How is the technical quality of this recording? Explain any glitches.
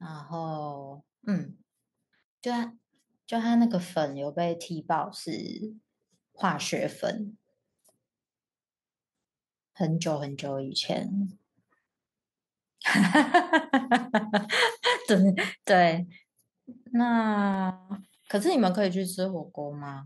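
The recording has two technical faults: a slow level rise at the start and a short burst of scratch ticks near the end.

From 0.06 to 7.04 s, automatic gain rising lifts the level by about 7 dB. The gain control judged the input too quiet and increased amplification gradually, so speech and background noise swell together. The waveform envelope widens steadily, and the spectrogram's noise floor brightens.

Between 17.33 and 17.75 s, CD scratch ticks appear as three brief clicks, roughly five a second and each well under a millisecond. Once per disc rotation, damaged data exceeded error correction, and the player patched the gap. Each tick shows as a thin vertical line across the spectrogram and a tiny spike in the waveform.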